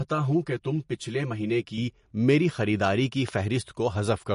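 Speech, likely passed through MP3 compression at a low bitrate, which fits about 40 kbps, where the encoder drops weak frequency lines and removes everything above 10.6 kHz, leaving plainly audible codec damage throughout. From 0 to 1.78 s, channel delay (comb filtering) occurs: one channel runs roughly 5 ms late before mixing to mono, cancelling evenly spaced frequencies from about 100 Hz upward for a hollow, phasey tone. At 3.29 to 3.31 s, a loud pop, likely a brief voltage spike, jumps about 10 dB above the speech, which continues underneath.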